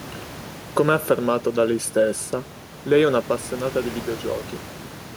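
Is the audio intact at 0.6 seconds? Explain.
Yes, the speech at 0.6 seconds is intact, with only the room's own background noise sitting about 20 dB below it.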